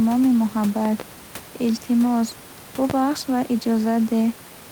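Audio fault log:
0.85–1.03 s and 2.90–2.93 s, loud pop: the first span holds two sharp pops in quick succession, peaking a few dB above the speech; the second is a single, harder pop about 10 dB above it. The speech, with its room noise about 22 dB below, carries on underneath each one. The likely cause is a sudden voltage step or pulse from a plug, switch, static or driver glitch entering the signal path, which the downstream circuits shape into a brief thump-like transient.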